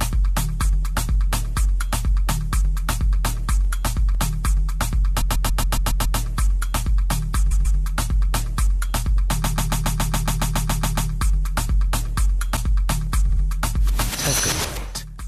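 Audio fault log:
5.20–6.18 s, 7.50–7.78 s, 9.43–11.10 s and 13.28–13.42 s: repeated frames. A 139 ms block loops 7, 2 and 12 extra times in the first three runs, and a 70 ms block loops twice at 13.28 s. Each one is heard as a stutter. On a spectrogram it appears as identical tiles side by side, and on the waveform as an exactly copied shape. The 139 ms length fits six frames of about 23 ms each. The repeats make the audio roughly 3 s longer.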